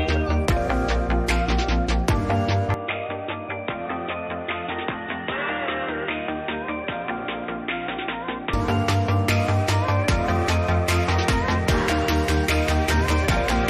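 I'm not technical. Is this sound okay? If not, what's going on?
No. From 2.74 to 8.53 seconds there's a likely input switched to a poorer device: the sound abruptly turns dull and boxy, with nothing above 3.8 kHz, drops noticeably quieter, and gains a faint new background noise, then snaps back to full clarity without any gap.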